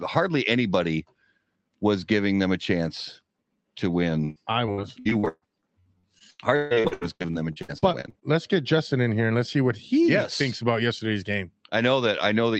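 From 4.25 to 8.23 s, repeated packet loss makes the speech choppy and robotic. Dozens of short gaps, up to 142 ms, are patched by stretching the previous sound.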